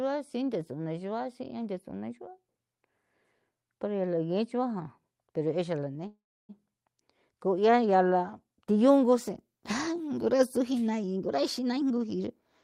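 A call audio freeze at 6.07–6.51 s interrupts this speech: the last sound is stretched into a brief fading buzz or hiss, then roughly 0.31 s of silence follows before the audio resumes exactly where it stopped. Nothing is lost, but about 0.42 s of gap is inserted, likely because delayed packets emptied the jitter buffer. A jitter buffer speed-up follows at 11.15–12.51 s. The receiver trims short pitch-period slices over and over to shed about 0.3 s of built-up delay, so the speech runs at 125% speed with unchanged pitch and sounds rushed. Throughout, the call codec adds its coding noise, with highs rolling off above 12 kHz, consistent with Opus.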